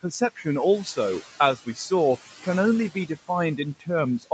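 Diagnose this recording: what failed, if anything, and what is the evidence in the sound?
The call-processing stage shows noise suppressor artifacts throughout the clip. The room noise sits about 17 dB below the speech and is pulled down by about 12 dB between phrases. It swells back under the speech. The suppressor is applying per-band, frame-by-frame gain.

The same suppressor also cut speech from 0.03 to 0.46 s and from 1.57 to 1.91 s. In each stretch, roughly a tenth of a second of low-level speech was misjudged as noise. That speech dropped by about 10 dB and about 14 dB respectively, leaving soft sounds swallowed.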